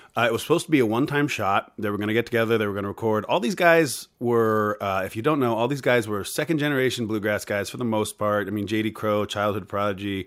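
No technical faults are audible at any point in the speech recording.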